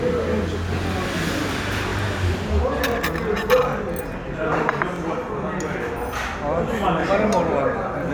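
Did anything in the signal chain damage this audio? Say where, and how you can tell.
Yes, at the buffer or chunked-processing stage. Overlapping chunks cause a brief stutter at 0.87–0.89, 1.89–1.92, 2.92–2.94, 3.94–3.96, 4.96–4.99, 5.99–6.01 and 7.01–7.03 s. Each is a 23 ms slice of sound played twice, recurring about every second. The audio was handled in 1.0 s blocks, and each new block began 23 ms before the previous one ended. That duplicated the overlap at every join and pushed each later join slightly further along.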